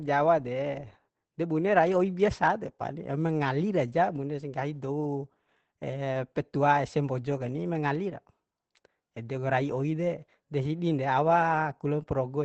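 Opus voice compression runs throughout: the SILK coder, at a rate that points to about 12 kbps, leaves speech plainly muffled and hoarse, with smeared harmonics and 20 ms frame-blocky texture on a spectrogram.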